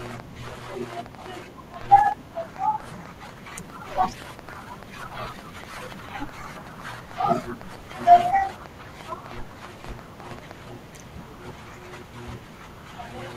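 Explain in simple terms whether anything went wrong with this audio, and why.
Something did go wrong here. From 0.06 s to 10.52 s, a train of clicks runs over the speech. There are roughly seventy of them, close to six every second, at an uneven pace. Each click sounds much like the last, a short tick or pop. Some are louder than the speech itself. They carry on through the pauses too. The likely cause is interference from nearby equipment or a faulty connection or power supply, adding these pulses again and again.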